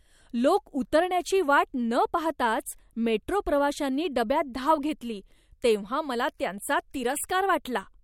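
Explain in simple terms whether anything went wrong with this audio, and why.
No technical faults are audible.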